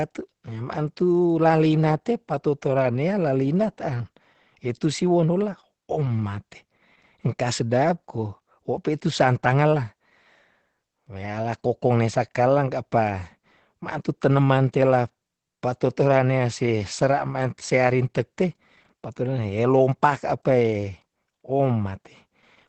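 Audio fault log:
Throughout: Opus voice compression. The speech sounds muffled, hoarse and faintly robotic, with nothing above 8.8 kHz. The linear-prediction coding of the excitation gives a grainy roughness that a plain low-pass filter would not, which fits a low rate near 12 kbps.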